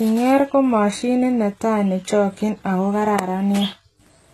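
Throughout, the speech was likely passed through HE-AAC compression at a very low bitrate, fitting about 16 kbps, so its treble is rebuilt from copied lower bands instead of coded. Nothing remains above 12.3 kHz, and s sounds turn heavily gritty, lispy and metallic.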